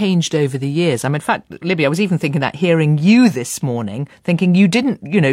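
No technical faults can be heard anywhere in the clip. Nothing in the audio stands out as a problem on technical grounds.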